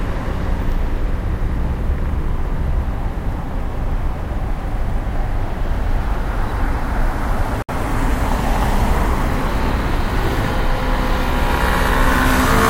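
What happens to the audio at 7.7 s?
At 7.62 s the sound drops out for about 65 ms, ending at 7.69 s. This is a gap at a join of encoded pieces. Separately encoded segments were joined without trimming encoder delay and end padding. The edges are smeared by the codec. The sound then resumes where it stopped.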